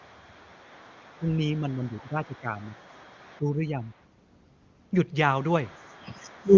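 From 1.19 to 2.8 s and 3.38 to 3.85 s the speech sinks by around 10 dB, shrinking the waveform envelope: likely speech suppressed in double talk.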